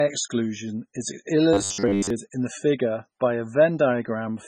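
A speech recording, heavily marked throughout by what is likely MP3 compression at a very low bitrate, consistent with something near 16 kbps. Weak spectral components drop in and out between frames, giving the audio a watery, swirling texture with metallic chirps on the s sounds and softened onsets. From 1.53 to 2.10 s the speech turns into a rigid buzz at 100 Hz: robotic sound from repeated short buffers. The steady pitch fits a roughly 10 ms block being replayed whenever fresh audio failed to arrive in time, with most of the real audio in that span likely skipped. The buzz still loosely follows the speech's rhythm.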